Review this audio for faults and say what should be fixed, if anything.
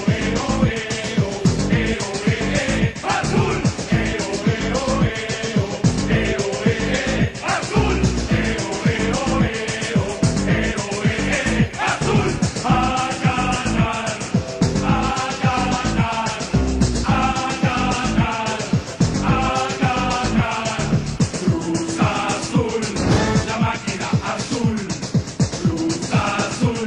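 Nothing here needs fixing; no faults turned up on review, so no action is required.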